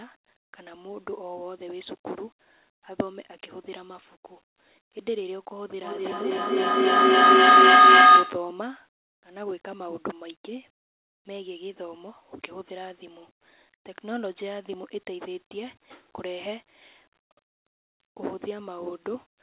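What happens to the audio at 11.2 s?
At 11.2 s the speech carries on intact, with no dropout, glitch or distortion at that moment, only the steady narrowband sound of the call path, which has nothing above 4 kHz.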